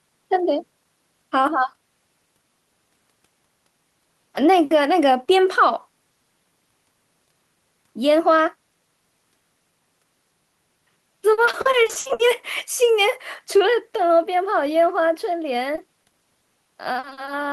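From 11.33 to 12.21 s, and again from 15.75 to 17.29 s, repeated packet loss (robotic sound) chops the speech. Short holes, up to about 60 ms, are patched by stretching the previous sound. That is why it turns choppy, with pieces missing, rather than falling briefly silent as a single dropout would.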